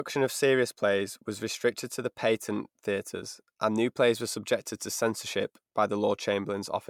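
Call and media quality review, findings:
Generation loss, whole clip: audio likely re-encoded through a lossy chain about three times, consistent with repeated MP3 passes near 128 kbit/s. Each pass requantises on a shifted frame grid, stacking noise and spectral holes. Result: swirly, hollow, smeared speech; consonant attacks blurred beyond single-pass bitrate expectations.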